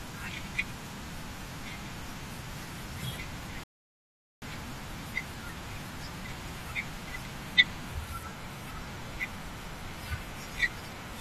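At 3.64 s the speech halts for about 0.79 s until 4.42 s, a rebuffering stall: playback drained its buffer, waited for data, then resumed exactly where it stopped.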